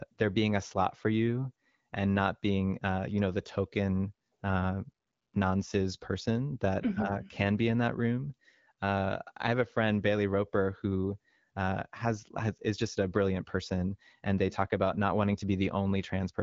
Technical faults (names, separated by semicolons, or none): none